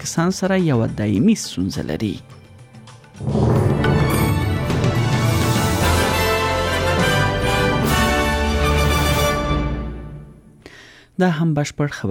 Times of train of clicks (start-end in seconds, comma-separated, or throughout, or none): none